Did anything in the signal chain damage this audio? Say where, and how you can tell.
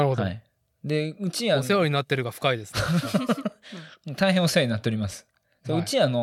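No, on listening nothing in this speech recording stood out as damage from any stage of the signal chain.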